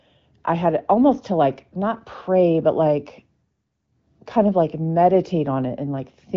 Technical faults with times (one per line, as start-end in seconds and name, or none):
none